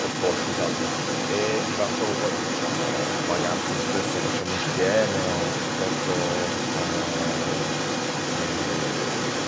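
Throughout, from 0 to 9.5 s, the echo canceller has likely left the far end's loudspeaker playback in the microphone signal. As a result, the other side's voice leaking through runs continuously alongside the speech, at roughly equal loudness, as a second voice.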